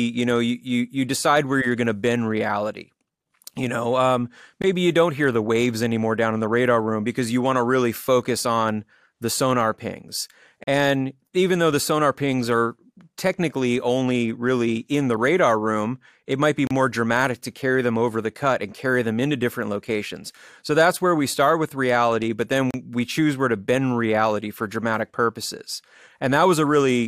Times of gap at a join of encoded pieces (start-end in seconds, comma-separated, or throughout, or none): 4.62, 10.64-10.67, 16.67-16.71, 22.71-22.74